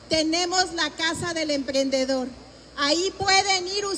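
No technical faults can be heard anywhere in the recording; the signal holds steady throughout, without interruption or damage.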